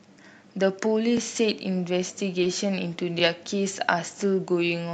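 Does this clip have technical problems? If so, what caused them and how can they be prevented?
Yes. Overlapping chunks cause brief stutters at 1.17 s and 3.19 s: each 2-second chunk starts 20 ms early, so that slice plays twice at the join. Prevent it by aligning chunk boundaries exactly or crossfading overlaps instead of concatenating them.

Short concealed packet loss smears the sound between 2.41 and 2.45 s, where about 20 ms never arrived and the decoder extrapolated the previous sound before blending back. Prevent it with a deeper jitter buffer, forward error correction, or a more stable network link. The call codec's coding noise and the top end stopping near 8 kHz are also audible.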